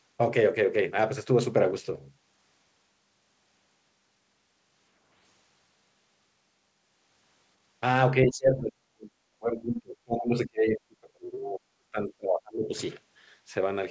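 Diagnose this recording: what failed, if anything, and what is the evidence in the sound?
The speech drops sharply, close to silence, from 8.11 to 9.14 s and again from 9.39 to 12.71 s. This is likely speech suppressed in double talk, in call processing: the echo canceller could not tell the talker from loudspeaker echo and attenuated both.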